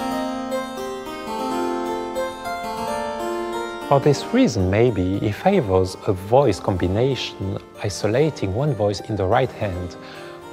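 Nothing here jumps out as a technical fault; the sound just runs along without any glitch, gap or break catching the ear.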